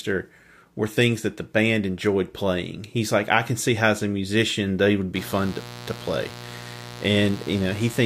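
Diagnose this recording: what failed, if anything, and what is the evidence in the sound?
Mains buzz from the analogue wiring starts at 5.15 s and lasts to the end: a raspy 60 Hz buzz roughly 15 dB below the speech. Switching spikes leak in twice per cycle, showing as stacked harmonic lines to several kHz on a spectrogram and a spiky 120 Hz waveform.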